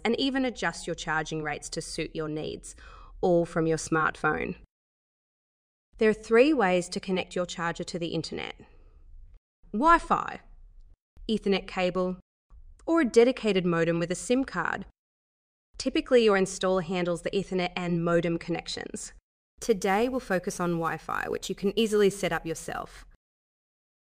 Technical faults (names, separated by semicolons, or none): sample clock jitter